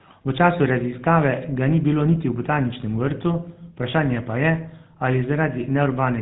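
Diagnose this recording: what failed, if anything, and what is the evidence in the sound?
Codec stage: the GSM full-rate codec colours the speech throughout. It sounds plainly buzzy and gravelly, with nothing above 4 kHz. That fits pulse-driven vocal-tract coding at 13 kbps.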